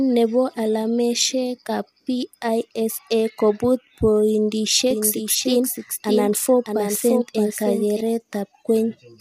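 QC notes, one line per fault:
Throughout: low-delay AAC compression. The speech is rough and grainy, with noise filling the gaps between harmonics and a thin, synthetic-sounding top band. This is likely AAC-ELD at a low rate, which fits about 32 kbps, where short frames blur pitch structure.
4.91 to 8.01 s: doubled audio track. A second full-band copy of the speech trails about 0.7 s behind, a few dB quieter, with no decay or room colour. It starts and stops abruptly, likely from a slower duplicate capture path mixed back in.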